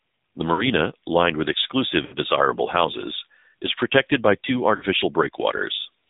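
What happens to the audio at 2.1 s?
Lost AMR speech frames occur from 2.06 to 2.15 s, a gap of about 60 ms that fits three consecutive 20 ms frames failing their checksum. The decoder fills the hole by reusing the last good pitch and vocal-tract settings at falling gain, so the sound briefly smears into a drawn-out warble and sags before it resumes. All of this sits inside the AMR narrowband mobile codec's 7.4 kbps coding, which leaves nothing above 4 kHz and gives the speech a plainly buzzy, synthetic edge.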